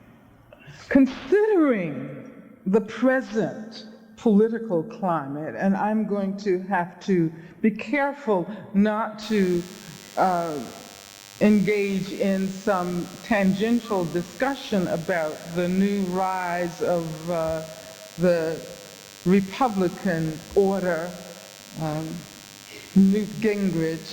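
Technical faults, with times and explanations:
9.2 s to the end: DECT cordless phone buzz. A thin, steady buzz starts and stays, around 20 dB below the sound. A nearby DECT handset or base transmits a radio burst every 10 ms. The audio circuit rectifies it, giving a 100 Hz tone rich in harmonics.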